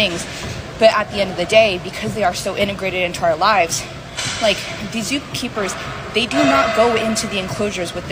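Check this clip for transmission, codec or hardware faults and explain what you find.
Two brief clicks stand out, at 2.25 s and again at 7.10 s, and both sound like dropped samples. At each point the waveform seems to jump straight from one value to a later one, most likely because a fraction of a millisecond of samples went missing. That gap is far too short to take any sound away. What you hear is one sharp tick, which would show as a thin vertical line through the spectrum.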